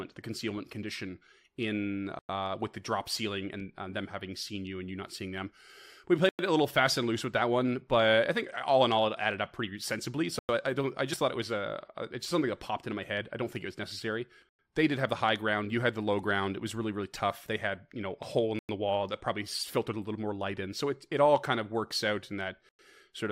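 Speech clip with three distinct problems. The most obvious is a gap between chunks: six short silent holes, each 100 ms long, starting at 2.19, 6.29, 10.39, 14.49, 18.59 and 22.69 s. They arrive like clockwork after every 4 s of audio, which points to the stream being delivered in 4-second pieces with dead air inserted at each join. Nothing is actually missing. The speech just stops and restarts, for example right after "think it was necessary" and just before "it a little fast".

There are also two spots where a corrupt frame was decoded: a short fault at 3.60 s and a slightly longer one at 12.30 s, the second one spanning what sounds like about three frames. In both cases damaged bits got through and the decoder played them anyway. That means misread gains or spectral codes dump energy at the wrong frequencies for the length of the bad frame or frames, so you get a chirp, squeak, blip or burst of noise instead of speech.

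Finally, compressed frames were skipped around 11.12 to 11.14 s, between "I I don't I" and "thought it was". Roughly 50 ms of audio is simply gone, so the speech jumps ahead. Whole frames were dropped, whether missing from the stream or rejected by the decoder as damaged.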